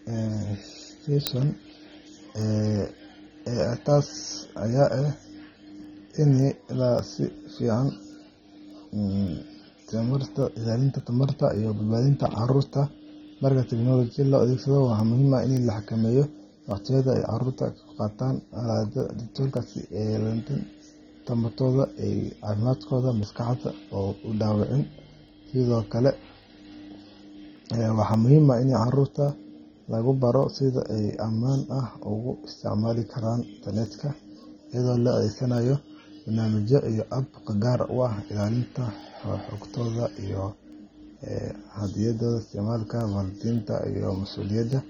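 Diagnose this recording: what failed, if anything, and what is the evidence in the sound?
Throughout the speech the top end is dull and smeared, with a warbling, fizzy edge on sibilants and sustained vowels. That points to the codec stage, likely AAC compression at a low bitrate around 24 kbps. Unlike a plain low-pass filter, it leaves a swirling texture.

Word clock ticks run from 0.12 s to 44.73 s, sharp clicks of uneven strength roughly every half second, about 70 in all. This is a converter fault: an unlocked digital receiver, its clock off by around 40 ppm, slips one sample at each crossing. Buffer dropouts would leave audible gaps. These ticks leave no gaps and keep a steady rate.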